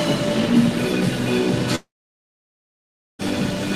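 From 1.75 s the sound decays into a fading buzz, then silence until 3.22 s, with 1.44 s lost: likely a long network dropout.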